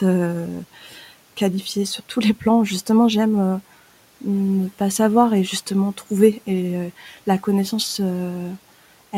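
Speech cut by the noise suppressor occurs from 0.74 to 1.06 s, just before "qualifiée sur tous les", and again from 6.99 to 7.18 s, just before "la connaissance". The suppressor misread soft speech as background and turned it down with the room noise (which sits about 26 dB under the speech), dropping it by about 10 dB and then about 8 dB. For roughly a third and a tenth of a second, the sound goes faint and swallowed.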